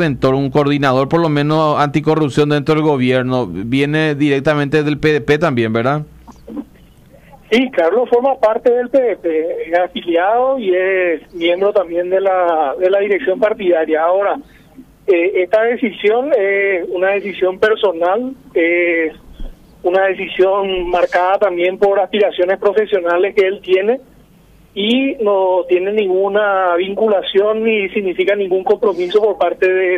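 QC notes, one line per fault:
No faults found on this pass; nothing to log.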